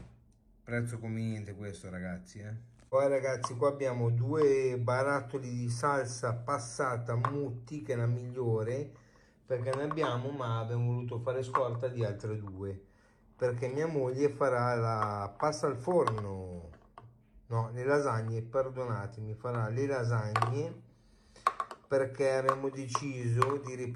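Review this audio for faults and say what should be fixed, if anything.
No faults; nothing needs fixing.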